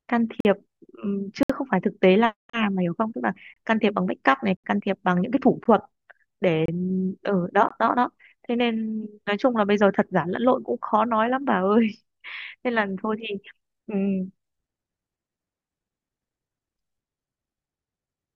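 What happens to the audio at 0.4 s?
From 0.40 to 0.45 s the speech stops dead for about 46 ms: a gap between stream segments, which fits a boundary between 1-second segments. Mismatched timestamps leave a hole that the player fills with hard-edged silence. Unlike a dropout, nothing is lost; the speech resumes exactly where it stopped, just delayed.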